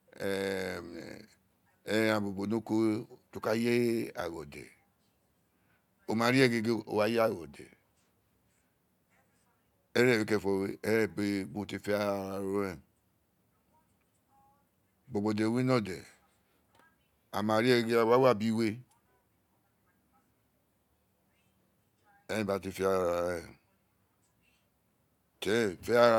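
No technical faults can be heard anywhere in this speech.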